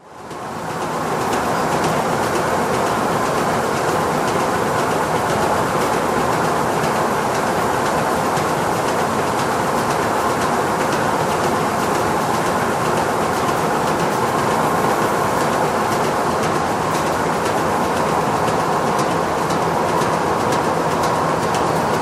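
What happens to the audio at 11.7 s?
At 11.7 s the audio carries on intact, with no dropout, click, distortion or other fault.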